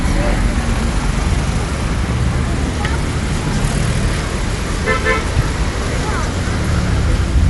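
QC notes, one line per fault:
Throughout, Dolby Digital compression: dull, nothing above 11.5 kHz, rough fluttering noise around tones, likely from an encode near 64 kbps whose decoder fills bit-starved lines with dither.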